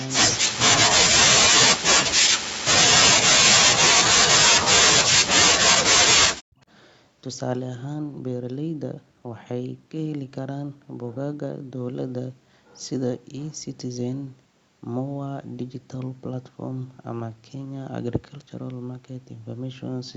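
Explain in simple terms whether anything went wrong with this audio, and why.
Two things go wrong. At the very start, from 0 to 0.11 s, there is a brief echo leak: a faint copy of the talker returns about 0.21 s late. Because it is a repeat of the sound and not a drop in it, it differs from the problem that follows. The likely cause is a loudspeaker on the other end whose echo canceller let a little of the audio slip back.

Next comes speech suppressed in double talk, at 1.28 to 2.54 s, 2.96 to 5.43 s and 5.64 to 6.61 s. The talker's voice sinks sharply or vanishes in pieces. Unlike an echo, nothing extra is heard; sound is taken away, likely because an echo canceller mistook the talker for echo while both sides spoke.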